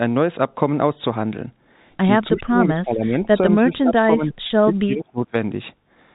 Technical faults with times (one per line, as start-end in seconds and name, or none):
2.32-3.33 speech suppressed in double talk
3.61-4.34 speech suppressed in double talk
4.47-4.50 packet loss with pitch repetition
4.65-5.35 speech suppressed in double talk